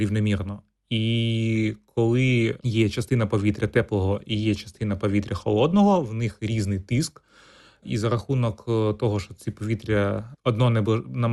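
Nothing goes wrong anywhere in this speech recording; it simply came through a WebRTC call path, and the top end stopping at around 12 kHz is just the normal behaviour of that call codec.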